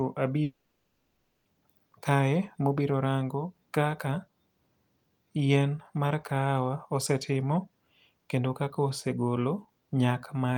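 A speech recording breaks off at 0.43 s. The last sound is stretched into a buzzy, fading tail. Near the end, about 0.29 s of plain silence remains. Speech returns at 1.48 s with "kae ma obiro rango". Roughly 1.02 s of the original audio never comes back. It is skipped, not delayed. The likely cause is a long network dropout. No packets arrived for about a second. The receiver filled the gap with concealment until it ran out.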